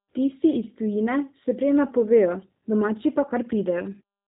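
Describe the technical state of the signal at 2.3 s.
At 2.3 s the speech is passing through a low-rate G.729 codec, which fits an 8 kbit/s stream. The codec rebuilds it from a vocal tract filter and sparse pulses, so nothing above 3.8 kHz survives, and it sounds muffled, slightly rough and synthetic.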